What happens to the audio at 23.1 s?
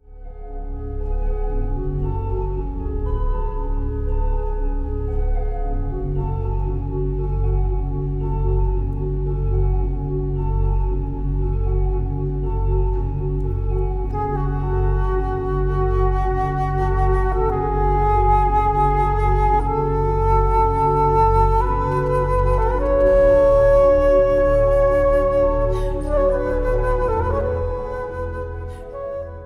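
A GSM phone buzz runs from 23.06 to 23.89 s. A nearby 2G phone in a call sends bursts 217 times a second, and the audio circuit rectifies them. The result is a steady, raspy 217 Hz buzz about 28 dB below the sound.

Just before it, from 21.92 to 23.02 s, GSM signalling bursts are heard. A nearby 2G phone sends only short groups of bursts, roughly 25 dB down. They are heard as galloping ticks and brief buzzes.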